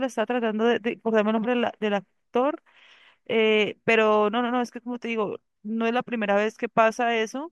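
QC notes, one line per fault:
No faults found.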